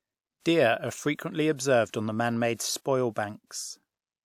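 A short hiss creeps in just ahead of two sharp onsets in the speech, first from 0.40 to 0.46 s, about 57 ms, then from 2.54 to 2.59 s, about 47 ms, and each attack lands softened and smeared. This is pre-echo: the transform codec spread quantisation noise across a whole block, so noise sized for the loud attack late in the block also filled the quiet stretch before it.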